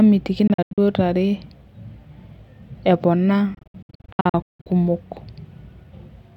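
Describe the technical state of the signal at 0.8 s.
Around 0.8 s the speech is just recovering from a stretch of broken-up gaps, running from 0.47 to 0.78 s. Within that 0.3 s window about 192 ms of sound is missing, spread as several abrupt holes, the longest about 85 ms, with the speech picking up later as though it had kept playing underneath. This is a Bluetooth dropout, likely caused by audio packets reaching the headphones too late and being discarded, with the pattern pointing to around nine lost packets.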